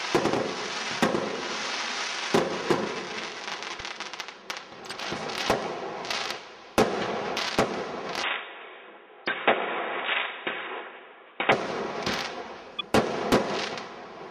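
At 3.71 to 3.81 s and again at 4.79 to 4.91 s, short blips of noise cut through the sound: each is a corrupt frame decoded, where damaged bits in a handful of compressed frames were played anyway, misplacing energy in frequency, peaking around -15 and -20 dBFS respectively.

From 8.23 to 11.52 s the sound turns dull and narrow, with nothing above 3.8 kHz, a new noise floor about 30 dB down and no level jump or gap, most likely the input switched to a poorer device. Inside that stretch, 9.25 to 9.31 s brings another corrupt-frame burst near -15 dBFS, and after it a single-frame chirp follows at 12.79 to 12.86 s.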